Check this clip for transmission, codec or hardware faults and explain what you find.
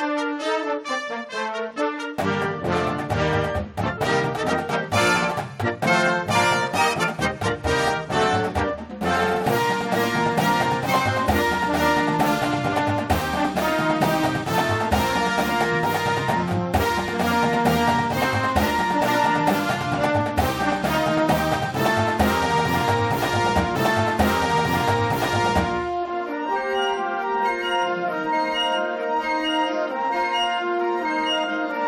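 One transmission fault is audible: a stream segment repeated. At 23.74 s the audio jumps back, with a small blip at the join. It then replays about 2.0 s of material until 25.74 s. The player fetched or queued that same stream segment twice.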